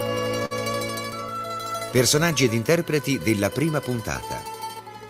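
At 0.45 to 0.53 s, a burst of packet loss. The last sound is stretched and fades for about 50 ms. The audio then jumps ahead, skipping a short stretch.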